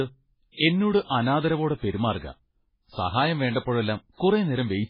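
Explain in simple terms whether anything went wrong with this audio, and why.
Heavy MP3 compression likely squeezed this speech hard, discarding whatever detail the encoder judged least noticeable. Nothing remains above 5.2 kHz, so from start to finish it sounds dull and muffled, with a watery, swirling quality and smeared consonant onsets.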